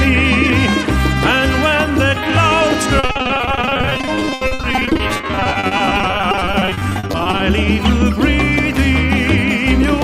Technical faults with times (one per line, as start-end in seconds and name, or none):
2.99-7.41 repeated packet loss (robotic sound)